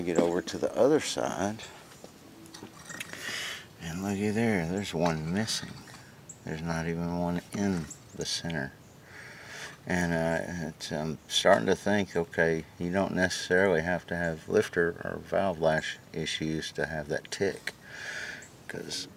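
From about 4.71 s to the end, crude rate conversion adds a gritty, inharmonic fizz roughly 35 dB down, consistent with linear interpolation from 44.1 kHz to 48 kHz.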